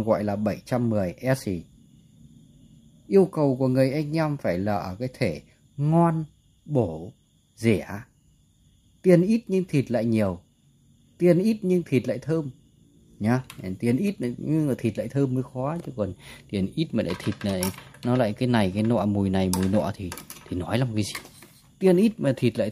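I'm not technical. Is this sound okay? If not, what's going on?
Yes, nothing in this recording points to a technical problem in how the sound was captured, sent or stored.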